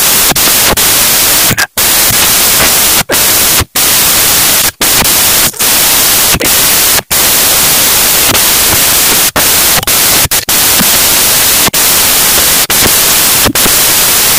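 Loud, harsh broadband noise, close to white on the louder sounds, fills the recording from start to finish. This is the signature of samples built from the wrong bytes: each sample is reassembled from misaligned or swapped bytes, so the rapidly changing low-order bits land in the most significant positions and dominate every value, turning the waveform into broadband noise.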